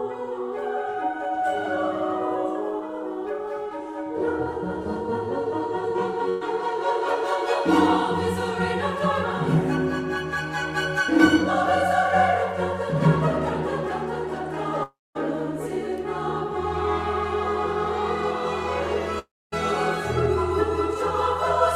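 At 6.29 s, a burst of packet loss leaves a 120 ms gap. The last sound is stretched and fades, and the audio resumes with that part missing.

From 14.83 to 15.17 s and 19.19 to 19.54 s, the sound fades into roughly a quarter-second of silence. Each is likely a long network dropout, with about a third of a second lost.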